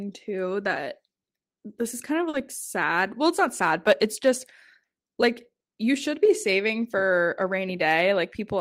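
At 2.29 to 2.36 s, just after "this is kind of", there is a short stall from a late packet. A packet missed its playout time, the jitter buffer ran dry, and the receiver stretched the last sound by 40 ms while it waited. Playback then resumed where it had stopped, so no speech is lost, but the held sound drags with a slight buzz or dip. That wait also adds 40 ms of delay.

From 7.98 to 8.55 s, after "be saving for a", a jitter buffer speed-up occurs. The buffer had built up more audio than its target, so the receiver trimmed it back by cutting out short pitch-period-sized pieces in quick succession, roughly 40 ms in all. Speech in this stretch runs at about 106% of normal rate with unchanged pitch, giving a slightly rushed, compressed delivery toward the end of the clip.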